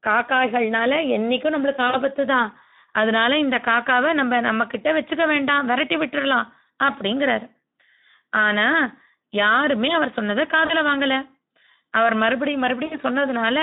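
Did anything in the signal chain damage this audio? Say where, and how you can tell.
Yes. At the codec stage, Speex coding damages the whole clip. The speech sounds noisy and hoarse throughout, and it sits in a narrow 200 Hz to 3.7 kHz band. That level of damage fits a low setting around 11 kbps, where the excitation gets too few bits.

At the network stage, there is VoIP packet loss concealed by the speech codec. Gaps occur at 1.89 to 2.01 s, 10.65 to 10.73 s and 12.85 to 12.97 s, losing about 40, 40 and 60 ms. Each gap turns into a stretched sound that fades. The decoder repeats its last pitch and filter while lowering the gain. The speech stays weak briefly afterwards.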